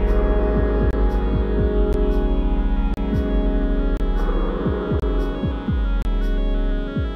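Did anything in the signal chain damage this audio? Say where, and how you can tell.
Yes, at the streaming playback stage: gaps between stream segments. Hard-edged silent holes of 13 to 32 ms fall at 0.91, 1.93, 2.94, 3.97, 5.00 and 6.02 s, one per second, where segment timestamps failed to meet. Unlike a dropout, nothing is lost; the sound resumes exactly where it stopped.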